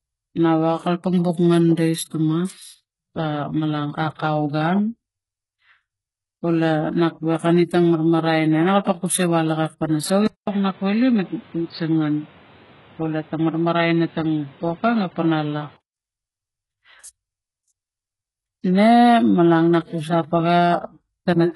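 Throughout the speech the top end is heavily damaged and cut off above 11.5 kHz, which points to HE-AAC compression at a very low bitrate, likely around 12 kbps. Only the lower spectrum is coded. The treble is rebuilt from copied lower bands, so s sounds turn gritty and metallic.

From 10.27 to 15.97 s the input likely switched to a poorer device. The sound turns dull, with nothing above 4.6 kHz. There is about 200 ms of silence at the switch and new background noise roughly 30 dB below the speech, while the level stays about the same.

Pre-echo appears from 10.44 to 10.47 s. The codec spread its quantisation noise across the block, so a sharp attack is preceded by about 30 ms of hiss and sounds smeared.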